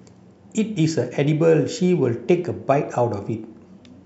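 No technical faults can be heard anywhere in the speech. Nothing at any moment in the recording stands out as a problem.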